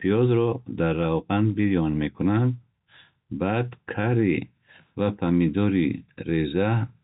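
Speech, with nothing technically wrong to point to. It has come through G.711 telephone coding, so the sound stops at about 3.9 kHz and any quantisation noise riding under it is faint.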